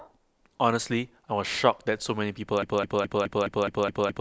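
At 2.63 s the speech falls into a broken-record loop. A 210 ms fragment repeats exactly, back to back, eight times until the end. The player or stream likely stalled and kept resending its last fragment. The audio meant for that stretch is lost.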